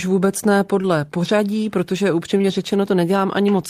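Around 0.81 to 0.86 s, right after "vůbec ne" and just before "pořadí protože", there's a short concealed packet loss. About 20 ms of speech never arrived, and the decoder papered over it by extending the last sound, so you get a quick smear. It happens again after "pořadí protože", this time twice back to back at 2.37 and 2.42 s, roughly 40 ms patched in total, which comes across as a slightly longer wobble.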